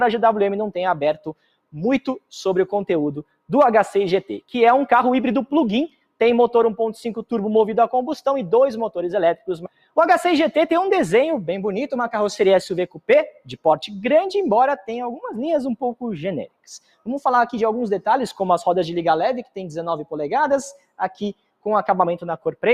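A noise suppressor applied to music or sounds runs across the whole clip, treating sustained tones and decays as noise. Level swings by roughly 5 dB, so held material pumps and thins while attacks pass. The waveform envelope breathes, and spectrogram tails fade early.

Sound cut by the noise suppressor appears at 1.18–2.32, 3.23–3.49, 5.88–6.21, 9.36–9.97, 12.88–13.65, 16.47–17.07, 20.73–21.66 and 22.38–22.63 s, dipping about 21–22 dB. Sustained passages sink, showing as hollowed waveform stretches and darkened spectrogram bands.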